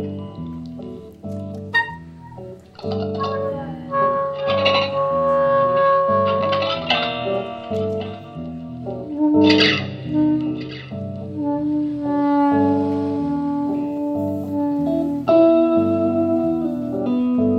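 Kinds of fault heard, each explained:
No faults detected; nothing to report.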